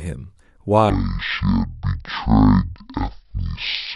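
From 0.9 s to the end, stereo read as mono plays interleaved samples as one channel: half speed, an octave low, plus a faint mirrored image high up, unlike simple slow playback.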